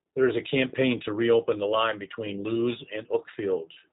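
From start to finish the speech sounds slightly rough and synthetic, with a plainly audible buzzy, processed edge and nothing heard above about 3.8 kHz, so sibilants and breathiness are dulled. That is G.729 codec damage, from the G.729A variant at a rate that fits 8 kbit/s. Rather than storing the waveform, the codec rebuilds each 10 ms frame from a vocal tract filter, a pitch predictor and a few sparse pulses, which costs natural texture and high-frequency detail.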